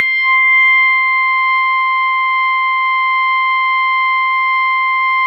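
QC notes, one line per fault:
No faults heard in this music.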